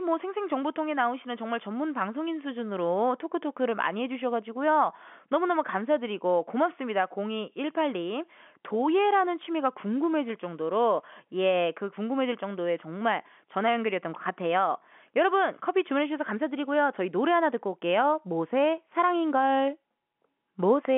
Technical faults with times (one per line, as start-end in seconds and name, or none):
none